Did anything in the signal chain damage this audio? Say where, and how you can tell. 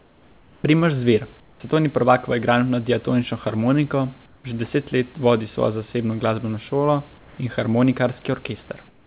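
Yes, in call processing. Comfort noise in place of the background appears at 0–0.64, 1.4–1.6, 4.26–4.44, 7.18–7.38 and 8.88–9.07 s. The room noise turns flat and featureless, about 2 to 7 dB quieter. Likely cause: discontinuous transmission, with the receiver synthesising the pauses.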